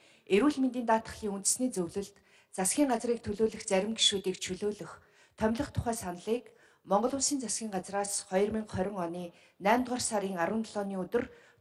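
Nothing is technically wrong with this audio.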